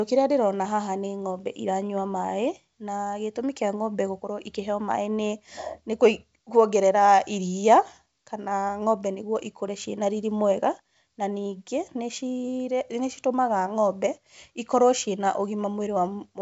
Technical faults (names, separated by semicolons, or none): none